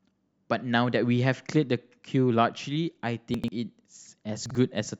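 A speech clip with chunks out of order at 3.34–3.48 s and 4.46–4.55 s: short blocks of about 46 ms play late, two chunks and one chunk behind, giving jumbled moments. On a waveform or spectrogram, each shows abrupt vertical discontinuities at the three hard joins.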